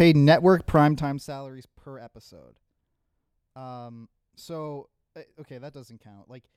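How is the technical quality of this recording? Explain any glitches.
There's one real glitch, and it's audible. From 0.8 to 1.44 s there's zipper noise: the speech drops by about 25 dB, but the gain moves in unsmoothed steps, roughly seventy a second, each leaving a tiny click. You hear a fast ticking riding on the fade.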